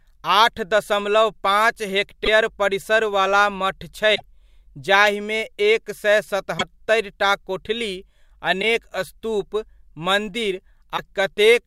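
Speech, with five short glitches. They fall at 2.24 to 2.28 s, just before "परिसरवला मठ छै", at 4.14 to 4.21 s, just after "परिसरवला मठ छै", at 6.57 to 6.62 s, after "जाहिमे एक सए", and at 8.61 to 8.64 s and 10.96 to 10.99 s. Each lasts 30 to 70 ms, about one to three frames of about 26.1 ms. The sound skips ahead at each point. The likely cause is a broken MP3 bit reservoir. Frames were lost, so the frames that followed looked back for borrowed data and decoded the wrong bytes.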